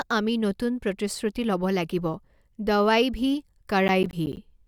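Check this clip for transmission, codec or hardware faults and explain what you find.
Processor overload crackle, 3.88 to 4.37 s: the processor misses a run of roughly 10 ms buffer deadlines, each leaving a hard-edged silent gap, so the speech tears into gritty crackle.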